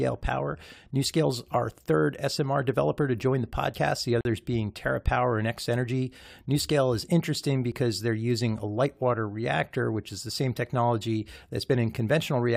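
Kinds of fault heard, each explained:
Audio missing between chunks: the recorder or processor likely works in 4-second blocks and loses a sliver at each handover. The sound skips at 3.74, 7.72 and 11.70 s, each time dropping around 20 ms, and the two sides are joined directly with no silence.
Gap at a join of encoded pieces: separately encoded segments were joined without trimming the encoder's start-up delay and final-frame padding, so that silence stays in. A 43 ms hole opens at 4.21 s in running speech, its edges smeared, then the sound resumes where it stopped.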